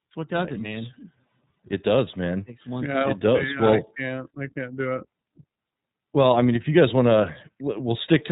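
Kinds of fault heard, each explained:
iLBC codec: narrowband speech codec coding each 30 ms frame independently, leaving nothing above 3.8 kHz and a plainly rough, synthetic edge throughout, fitting roughly 13.3 kbps.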